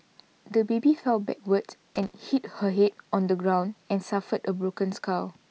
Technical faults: loose connector crackle

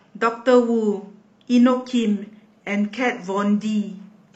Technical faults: adaptive stream at a lower bitrate

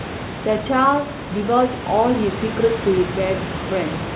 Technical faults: none

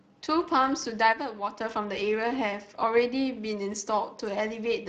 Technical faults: Speex codec; one channel drops out

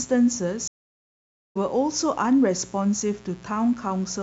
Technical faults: mains buzz; stream reconnect

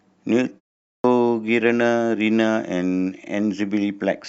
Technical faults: clipped start after a pause

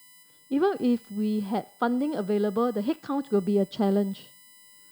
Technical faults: USB whine

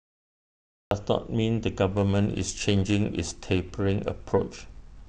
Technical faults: cut-off start; periodic clock jitter

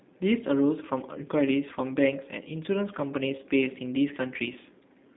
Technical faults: G.729 codec

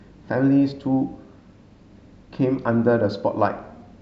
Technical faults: none

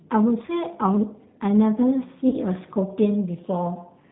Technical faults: G.729 codec; VoIP packet loss concealed by the speech codec

